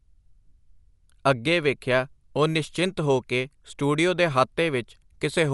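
From start to finish the speech sounds dull, with nothing above 11.4 kHz and a rough, fluttering noise clinging to voiced tones. That's likely Dolby Digital compression at a starved rate, around 64 kbps, where bare frequency lines get filled with dither noise.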